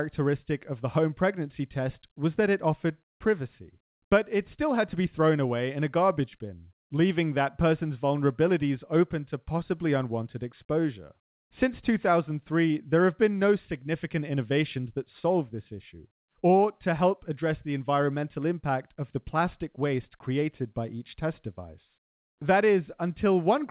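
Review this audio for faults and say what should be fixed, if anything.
Nothing stood out on listening to this speech recording, so there is nothing to fix, and the narrow telephone band heard here, with nothing above 4 kHz, is simply how the G.711 call path carries the sound.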